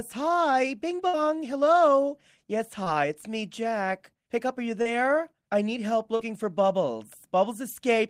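At 1.07 to 1.15 s there is a burst of packet loss: about 60 ms of the speech never arrived, and the receiver stretched the last sound across the hole, fading it as it went. It is heard as a held, decaying buzz or hiss before the speech picks up further along. Unlike the shorter dropouts that follow, it leaves a clear jump where a slice of speech is gone.

Short concealed packet loss follows at 2.83 to 2.88 s (about 20 ms missing), at 4.82 to 4.87 s just after "up are you", and at 6.15 to 6.21 s just after "I need help" (about 40 ms each). Each gap was filled by continuing the preceding sound and blending back into the real signal, so each is a brief smear or wobble rather than an audible fade and jump.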